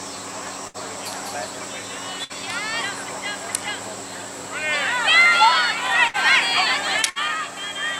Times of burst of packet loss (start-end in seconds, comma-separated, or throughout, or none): 0.67-0.77, 2.24-2.32, 6.07-6.17, 7.10-7.18